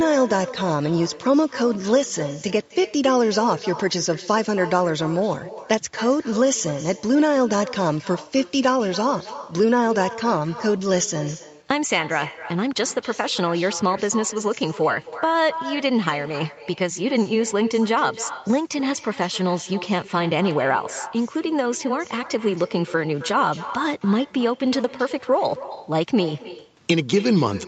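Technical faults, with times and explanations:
Throughout, echo with no canceller: the speech keeps coming back as a fainter, thinner copy, about 15 dB down and trailing by roughly a third of a second. The far end's loudspeaker is leaking into its microphone, and nothing strips it out before the round trip back.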